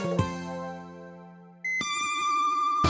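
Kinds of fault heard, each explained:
Wrong sample rate: the sound runs twice as fast and a full octave high throughout, which fits 8 kHz audio played at 16 kHz; a pitch shifter alone would keep the timing.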